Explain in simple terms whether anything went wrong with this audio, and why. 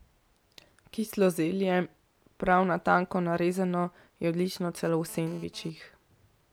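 From 4.77 to 5.70 s a hard, raspy buzz sits under the speech. This is GSM phone buzz. A 2G mobile phone close to the recording equipment was sending data, and its radio transmits in short pulses about 217 times per second. The audio wiring picked up those pulses and turned them into sound, producing a harsh tone at 217 Hz with many overtones. Because the phone was transferring data rather than holding a call, the buzz appears only briefly.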